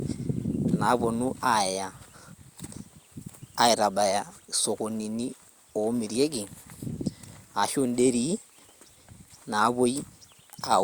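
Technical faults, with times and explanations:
Nothing technical goes wrong anywhere in this speech recording.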